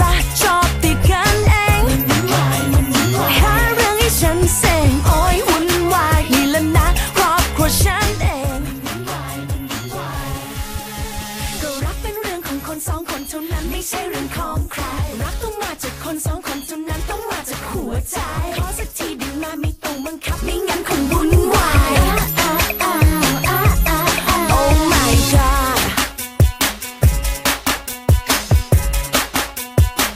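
No technical faults can be heard anywhere in the audio.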